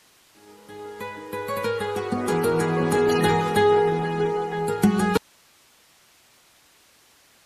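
At 5.18 s the signal drops out to a faint residue of hiss, about 35 dB down, until the end; the likely cause is a lost feed on a live path. The cut is abrupt, unlike a fade.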